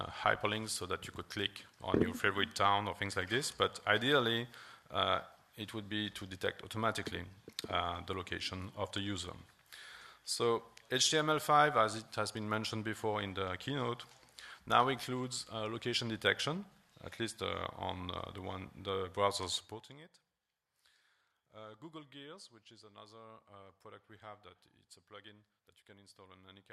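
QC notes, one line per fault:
19.54 to 20.03 s, zipper noise: the level gets pulled down by roughly 20 dB in a hurry, but instead of gliding it drops in hard 1 dB jumps, something like 40 of them a second. Each jump is an instant gain change with no smoothing, so it leaves a tiny click in the waveform, and strung together those clicks come across as a quick ticking zip riding on top of the sound for that half second while the fade happens.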